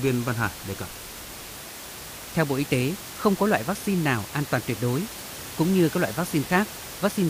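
A speech recording with nothing technically wrong in it; the only other thing to hear is a bit of room noise sitting about 14 dB under the speech, which is just the space the microphone was in.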